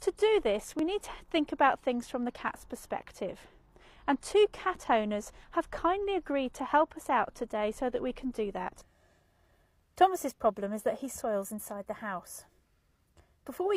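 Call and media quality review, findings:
Overlap between stream segments, 0.79 to 0.84 s: a tiny skip where about 42 ms of audio goes missing. Probable component is the player or packager at a segment seam. The timestamps of two segments overlap, the player trims what it thinks is duplicated audio, and the waveform jumps across the gap. Only one hit in this clip.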